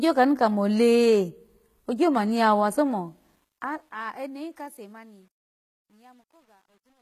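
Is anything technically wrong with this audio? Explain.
Yes, there are two faults.

Throughout the clip, the speech has plainly audible codec damage. Nothing remains above 14.9 kHz. The top end sounds bright but synthetic, and sibilants come out gritty and metallic. This is likely HE-AAC compression at a very low bitrate, around 20 kbps. That codec keeps only the lower spectrum. It fakes the treble by copying lower bands upward under a coarse envelope. The copied harmonics don't line up with the real ones.

From 2.81 s, just after "kamo anu yawa", to the end at 7.01 s, there is truncation distortion on the fade. The fade-out itself runs from 2.81 s to 7.02 s. But the gain stage keeps too few bits, which fits a 10-bit stage, and adds no dither. As the level drops, the waveform collapses into coarse steps. It is worst from 4.37 s to 7.02 s, where the tail turns grainy.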